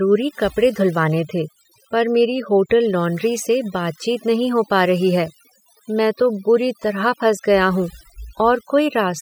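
Speech, with overdone noise removal running through the whole clip. The reduction is set so aggressively that frequency bands near the noise estimate are pulled down or switched off outright, taking the quieter parts of the voice with them. Between phrases the background drops and breaks up into twinkling specks.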